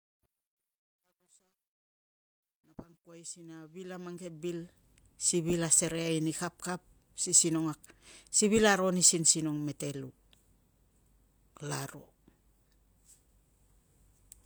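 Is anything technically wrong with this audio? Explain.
Yes. Truncation distortion on a fade affects the opening fade-in, from the start to 4.95 s. It is worst up to about 3.4 s. The fade keeps only about 12 bits and adds no dither. Quiet passages turn into coarse steps. The sound is gritty before clearing.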